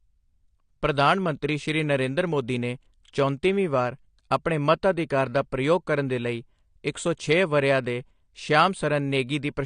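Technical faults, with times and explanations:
Throughout, AAC compression. Nothing is heard above 10 kHz, so the speech sounds dull. Codec damage is plainly audible as a smeared, warbling texture on sustained sounds and sibilants. The likely cause is AAC-LC coding at a low bitrate, fitting 32 kbps.
6.93 s, pre-echo. Between "ਪ੍ਰਯੋਗ ਕਰਨ ਦੇ ਲਈ" and "ਸੌ ਛੇ ਵਰ੍ਹਿਆਂ ਦੇ", a brief hiss of 18 ms comes just before a sharp onset. The codec spread noise sized for the loud onset across its whole block. That noise fills the quiet moment ahead of it.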